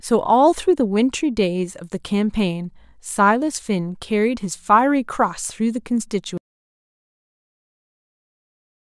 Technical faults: audio dropout to silence

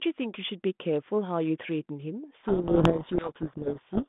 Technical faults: codec payload misread

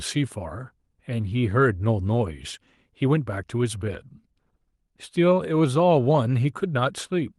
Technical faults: none

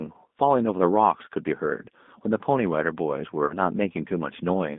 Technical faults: G.729 codec; VoIP packet loss concealed by the speech codec

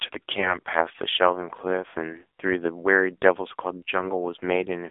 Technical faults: AMR narrowband mobile codec; lost AMR speech frames

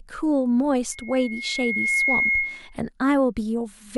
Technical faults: loudspeaker feedback squeal

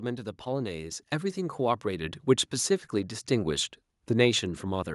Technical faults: microphone volume stepped up

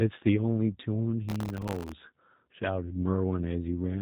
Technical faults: G.729 codec; processor overload crackle

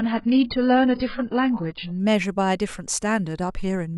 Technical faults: adaptive stream starting at a low bitrate

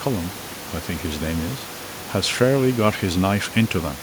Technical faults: none

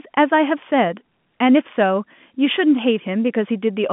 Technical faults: none

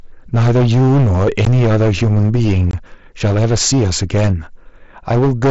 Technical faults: hard clipping; unconcealed Bluetooth headset packet loss

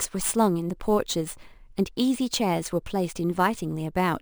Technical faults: crude rate conversion

